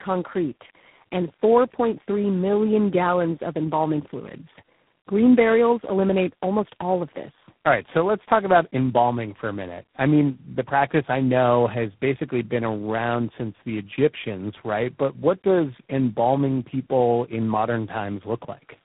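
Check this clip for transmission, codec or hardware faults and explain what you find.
One fault runs throughout the speech: tandem speech coding. The sound fits three speech coders in a row, GSM full rate, then G.729A, then G.726, each re-encoding its predecessor's damage. Unlike one narrowband codec, it compounds into rough, muffled, warbly speech with nothing above 3.9 kHz.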